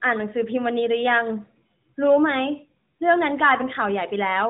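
No technical faults can be heard in this speech, which comes across as narrowband mobile-codec audio consistent with AMR-NB at 12.2 kbps.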